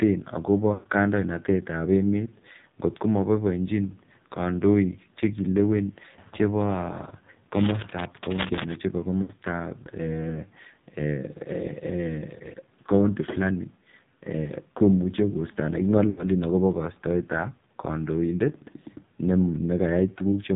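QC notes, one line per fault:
Throughout: AMR narrowband mobile codec. Nothing passes above 4 kHz, and the speech has the heavy buzzy, synthetic quality of a vocal-tract model fed by very few pulses, which points to a low AMR-NB mode near 6 kbps. Unlike a plain low-pass filter, it makes the voice itself sound artificial.
0.74–0.88 s, 9.22–9.34 s, 16.10–16.24 s: lost AMR speech frames. The decoder repeats its last good pitch and vocal-tract settings at falling gain, so the sound smears and sinks toward silence for about 120 ms in the first gap and 80 ms in the others, then returns weak and rough. A dropout would cut off abruptly instead.
7.53–8.78 s: cable scratch noise. Dense, irregular bursts of scratching and rustling sit only a little below the speech level for over a second, likely from a worn cable, connector or control changing its contact resistance as it moves. Steady hiss or hum would not fluctuate like this.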